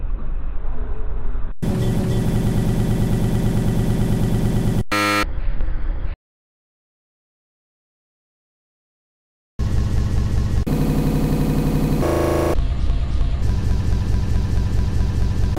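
At 6.14 s the sound cuts off abruptly in an audio dropout to silence lasting about 3.45 s, until 9.59 s. The input likely disconnected while recording continued, leaving silence: a flat waveform line and a blank spectrogram band, with no room tone.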